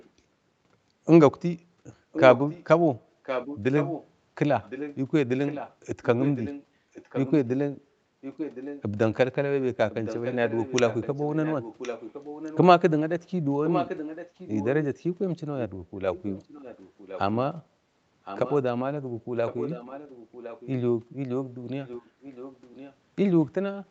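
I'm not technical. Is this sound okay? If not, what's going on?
No. A delayed repeat of the speech trails about a second behind, at 0.0 to 0.1 s, 2.1 to 8.8 s, 9.9 to 12.6 s, 13.7 to 15.0 s, 16.1 to 17.2 s, 18.2 to 18.6 s, 19.5 to 20.7 s and 21.9 to 23.0 s. It is quietest at the very start, clearest between 2 and 15 s, and a little softer after that. This is an echo leak, likely from someone on the call using a loudspeaker. Their echo cancelling didn't fully remove the sound their microphone picked up, so it came back about 1.06 s late.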